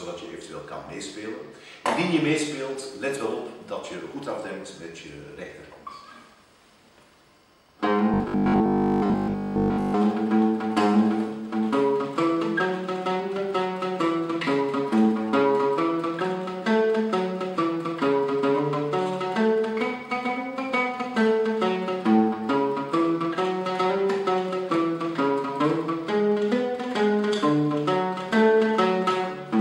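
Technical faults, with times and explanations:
8.14 to 9.98 s, robotic sound from repeated short buffers. The audio turns into a rigid, metallic buzz pitched at 50 Hz, while its overall shape still loosely follows the original. The likely cause is new audio arriving too seldom, so playback fills the gaps by looping a very short stretch, which fits a 20 ms buffer. Most of this section, around 70 percent, is repeated material, and the real audio in those gaps is skipped.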